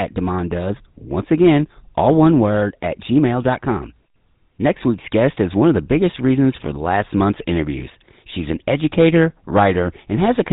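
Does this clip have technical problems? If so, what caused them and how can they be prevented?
Yes. The whole clip carries GSM full-rate codec damage, plainly audible. The speech has a buzzy, gravelly roughness. Nothing above 4 kHz comes through, so it sounds dull and boxed in. The codec models the vocal tract as a filter and drives it with a sparse, regularly spaced pulse train. Fine detail in the excitation is thrown away. The character fits the 13 kbps full-rate codec. Prevent it by using a wideband or modern codec such as AMR-WB or Opus.

GSM bit errors break the sound at 6.52 to 6.65 s, with a brief squawk and gargle. A shorter pop follows at 8.56 s. Corrupted bits reached the decoder on a weak radio link. Damaged filter, pitch or gain values bent the spectrum or spiked the level frame after frame while the bad patch lasted. The first burst sounds like several consecutive frames were hit. 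The second sounds like only a couple. Prevent it with a stronger signal, plus error protection and bad-frame concealment in the decoder.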